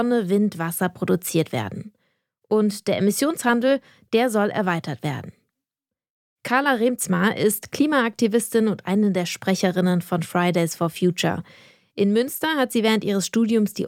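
No faults are audible anywhere in the clip.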